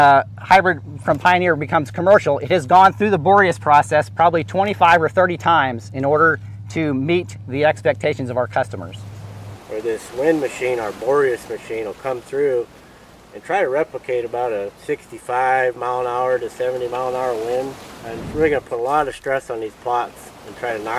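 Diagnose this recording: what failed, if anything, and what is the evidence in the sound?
Nothing in the recording stood out on listening as a sign that any stage had failed.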